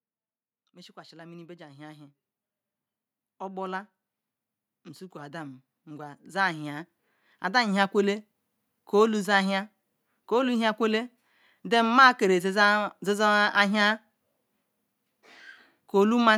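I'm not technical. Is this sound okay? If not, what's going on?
No. Twice, from 0.59 to 2.22 s and again from 5.11 to 6.95 s, the automatic gain rising is audible: the recording level creeps up because the input seemed too quiet. The speech and the background noise behind it swell louder together.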